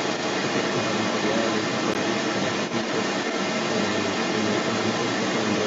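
From the first moment to the end of the clip, a second voice runs underneath the main speech, and it sits at roughly the same loudness or a little above it. This is the other side's voice leaking through. It is likely that the talker's device played the far end on a loudspeaker and the echo canceller failed to subtract it from the microphone signal. A room reverb tail would smear the main speech itself, but this is separate, independent talking that persists across the whole clip.

At 1.94 s the sound drops out to silence for 14 ms and then resumes, a Bluetooth stall. The likely cause is held-up packets that let the headphone buffer run empty until the resent ones arrived. Unlike a codec packet-loss concealment glitch, which fills the gap with smeared or repeated sound, this is a clean hole of true silence. All of this sits within a band that stops at 8 kHz, as expected from the call path's microphone processing.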